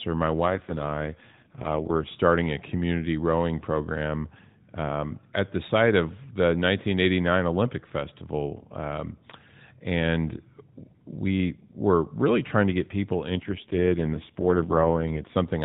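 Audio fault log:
0.46 to 2.11 s and 13.30 to 15.35 s, AMR rate drop: The speech turns rough, buzzy and synthetic, then clears before "a community rowing program". It degrades again after "trying to get people". The band holds, with no gap. This fits the AMR-NB codec stepping down from 12.2 to 4.75 kbps, which leaves fewer bits to model the voice.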